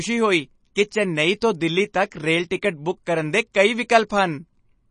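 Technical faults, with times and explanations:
Throughout, MP3 compression: the speech sounds watery and swirly, with a metallic chirp on s sounds, smeared consonant onsets, and nothing above 9.8 kHz. The likely cause is an MP3 encoder that ran short of bits, which fits a low bitrate near 32 kbps. It sliced off the treble at a fixed point and zeroed the weaker frequency lines, which then flicker on and off between frames and blur the attacks.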